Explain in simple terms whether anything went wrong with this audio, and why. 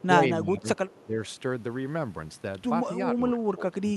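The talker's voice dips noticeably quieter in three places: from the start to 0.69 s, briefly from 1.03 to 1.17 s, and again from 3.13 s to the end. This is speech suppressed in double talk. Both sides likely spoke at once, and the echo canceller turned the talker down along with the echo.

Between 0.76 and 1.06 s, a very faint copy of the voice trails about a quarter of a second behind. This is an echo leak. The other side's loudspeaker was likely picked up by its microphone and not fully cancelled, so a scrap was sent back.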